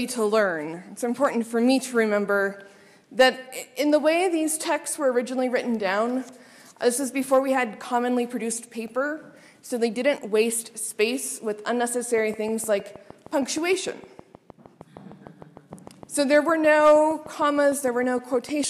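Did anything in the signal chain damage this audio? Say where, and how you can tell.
Yes: a train of clicks from 12.18 to 18.65 s, likely interference in the analogue wiring, ticks regularly at 6.5 per second, about forty pulses roughly as loud as the audio.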